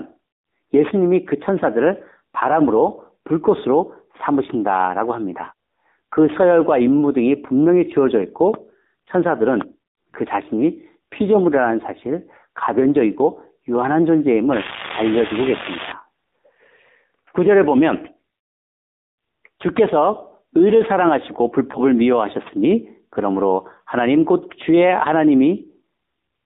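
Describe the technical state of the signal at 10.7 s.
AMR narrowband mobile codec damage is present at 10.7 s, as it is across the whole clip. The speech has been squeezed into a telephone band of roughly 200 Hz to 3.7 kHz, then rebuilt from a vocal-tract model excited by a few pulses per 5 ms slice. At the bit budget this points to, about 7.4 kbps, the rebuild is coarse, so the voice comes through plainly buzzy and synthetic, with no air above the band edge.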